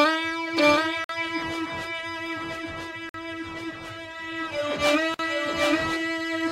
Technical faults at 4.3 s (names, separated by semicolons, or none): none